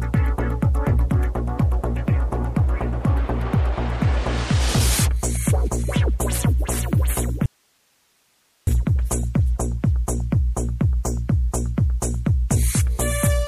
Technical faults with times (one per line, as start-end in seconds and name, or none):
7.46-8.67 audio dropout to a faint residue